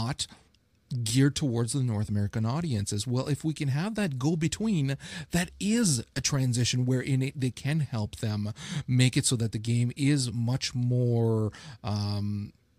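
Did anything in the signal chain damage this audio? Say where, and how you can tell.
No, nothing in the chain has left an audible mark on this speech; no stage shows damage anywhere in the recording.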